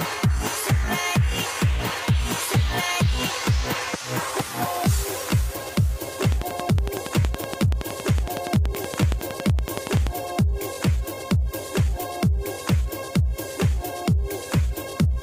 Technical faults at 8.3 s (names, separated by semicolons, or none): train of clicks